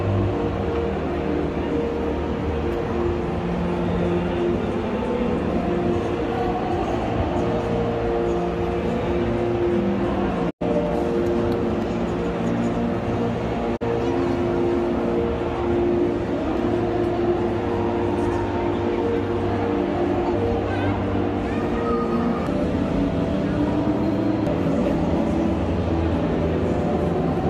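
At 10.49 s the sound fades out over about 20 ms and stays silent until 10.63 s, then a shorter hole follows at 13.76 to 13.83 s. It's a digital broadcast dropout: the receiver muted on bad frames, and the gaps fit three 32 ms frames and then one.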